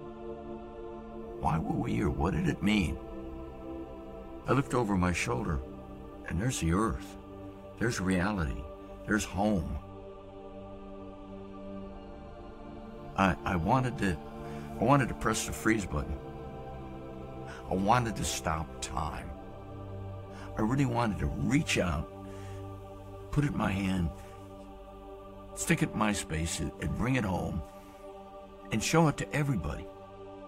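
No technical faults are audible.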